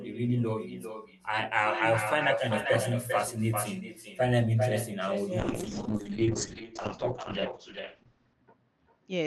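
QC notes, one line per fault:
throughout, echo with no canceller: every phrase returns about 7 dB quieter roughly 0.4 s later, thin, since the far end's speaker feeds its mic.
5.4 to 9.26 s, call bitrate drop: the encoder falls from 40 to 8 kbps and top end narrows to 8 kHz, so speech turns rough and muffled to the end.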